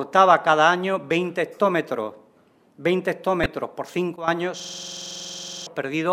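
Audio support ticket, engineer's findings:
Chirp/blip of misplaced energy at 3.43–3.46 s, roughly 27 ms, about a couple of frames' worth. Corrupt frame decoded: flipped bits in compressed frames, decoder played them anyway, misread gains and codes pushed energy into wrong frequency bands.

Abrupt level drop at 4.16 s, sound and background noise falling together by about 12 dB, restored by 4.28 s. Likely a sudden gain jump: digital gain stepped sample to sample with no ramp, e.g. setting or bit shift applied directly.

Machine-gun stutter 4.60–5.67 s, one 46.44 ms slice repeating exactly at 21.5 Hz, some 23 times, about a second of audio lost. System hang loop: host/driver froze, hardware kept cycling its ring buffer. Loop length fits a 2048-sample buffer.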